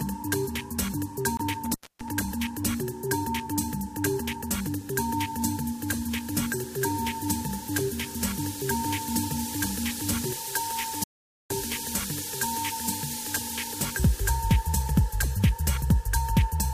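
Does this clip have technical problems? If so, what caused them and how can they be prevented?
Yes, there are four technical faults.

At 1.37 s the sound stops abruptly for about 42 ms, a silent hole that fits one compressed frame being rejected. This is a corrupt frame muted: flipped bits made the decoder discard the frame, and the player filled its slot with silence while keeping timing. Prevention: use error-checked transport or storage and verify files with checksums.

From 1.65 s to 2.09 s the sound breaks up, with the line open for about 266 ms and crackle at the edges. This is an intermittent contact, where a loose cable or plug momentarily lost its connection. Prevention: reseat and secure connectors, and replace worn cables.

From 11.04 s to 11.50 s the sound cuts out for about 0.47 s into complete silence with no room tone, and whatever happened then is lost. This is an audio dropout to silence, likely from the input being lost through a disconnected device, failed link or stray mute while recording continued. 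Prevention: monitor inputs live and lock down mute controls and links.

At 13.18 s there is a very short burst of misplaced energy, around -40 dBFS, lasting about one frame. This is a corrupt frame decoded: flipped bits were played anyway, putting energy at the wrong frequencies. Prevention: add error detection so damaged frames are caught before decoding.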